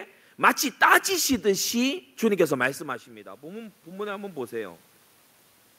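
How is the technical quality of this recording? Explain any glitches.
The recording has one clear technical glitch, an automatic gain rise.

Automatic gain rising, from 1.83 to 4.87 s: the level reaching the microphone dropped by about 15 dB when the talker moved back, around two and a half seconds in. The automatic gain control sensed the quieter input and slowly raised its gain by about 7 dB over roughly three seconds. Because that gain applies to everything it picks up, the room's background noise swells audibly along with the speech, while the speech itself only partly regains its earlier loudness.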